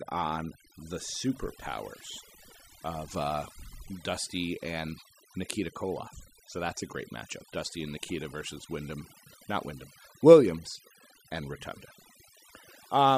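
Overdone noise removal affects the whole of this speech recording. The background sinks to near silence, flecked with twinkling specks, and quiet parts of the voice are pulled down along with it. Unlike a noise gate, which cuts everything at once, the suppression works band by band.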